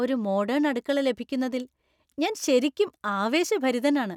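No technical faults are audible.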